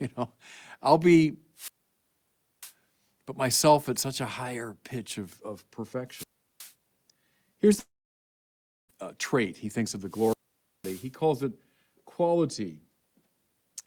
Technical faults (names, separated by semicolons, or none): wireless microphone squelch dropout; long network dropout